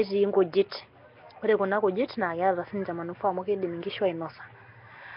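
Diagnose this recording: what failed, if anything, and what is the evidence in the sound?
Codec stage: heavy Nellymoser compression, likely from Flash's Nellymoser Asao, fitting a bitrate near 22 kbps. The speech carries a rough, hissy halo and smeared, underwater quality throughout; a spectrogram shows nothing above 5.3 kHz and blotchy, noise-filled bands where starved regions were synthesised.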